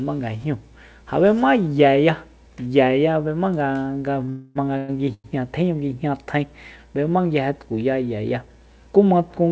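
At 4.26 s a short stall from a late packet holds the speech for about 16 ms. The jitter buffer ran dry and the receiver stretched the last sound until the packet came in, so the held sound is slightly too long, with a slight buzz or dip. On a spectrogram the harmonics run flat and unchanged for that moment, and in the waveform one cycle shape repeats.

Right after, from 4.29 to 4.57 s, a call audio freeze sets in. Packets were likely delayed in transit, so the buffer ran empty and the receiver kept the last sound going for about 258 ms as a buzz that fades without reaching silence. The waveform shows a repeating, shrinking pattern, and the spectrogram shows smeared horizontal bands.

A second freeze from 4.77 to 4.90 s adds about 111 ms in the same way. Nothing is lost in either freeze, and the speech resumes where it stopped.

From 5.14 to 5.26 s another short stall fills about 98 ms, stretching one sound before the speech continues. 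The spectrogram shows frozen bands, and every event sits under the call path's band edge, with nothing above 8 kHz.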